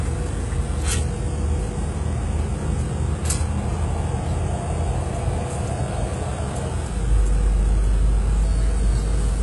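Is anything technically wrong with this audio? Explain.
Yes. Throughout, the treble turns gritty and metallic and stops dead at 11.5 kHz, heavy damage likely from HE-AAC compression at roughly 12 kbps, with band replication faking the top end.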